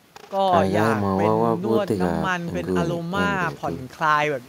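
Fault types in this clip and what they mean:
No fault types can be heard in this clip.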